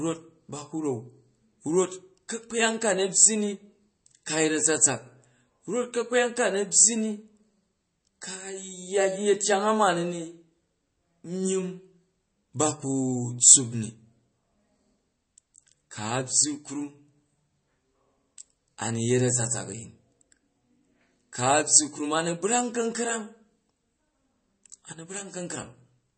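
Throughout, likely MP3 compression starved of bits, which fits roughly 32 kbps, cuts everything above 8.4 kHz and leaves the speech plainly watery and swirly, with smeared attacks.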